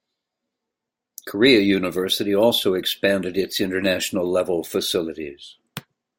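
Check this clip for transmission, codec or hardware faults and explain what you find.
Nothing wrong turns up in this speech recording, and the signal stays continuous and intact throughout with no technical problem to report.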